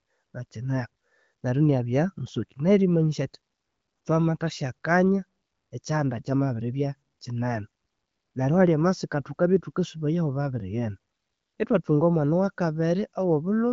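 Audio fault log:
No faults logged; the speech passes through an AMR wideband (HD Voice) path, with nothing above 7.3 kHz, which fits an 18.25 kbit/s rate.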